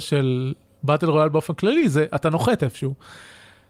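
At 1.79 to 1.83 s, short concealed packet loss: about 20 ms of speech arrived too late, so the decoder extrapolated the preceding sound, leaving a brief smear.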